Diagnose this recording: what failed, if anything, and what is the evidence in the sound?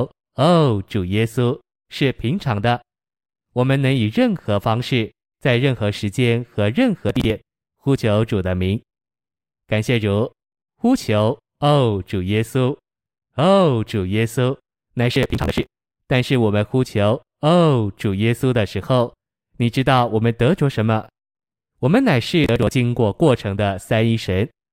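The failure sits at the driver or buffer stage: processor overload crackle in three bursts, at 7.09 to 7.30 s, 15.14 to 15.98 s (the longest), and 22.44 to 22.71 s. Each burst is a rapid run of hard-edged gaps in the speech. The tiny skips repeat at a pace that suggests buffers of around 10 ms being dropped outright, with nothing held or repeated. Unlike network packet loss, there is no smoothing or repeated audio, only gritty tearing that stops cleanly once the load eases.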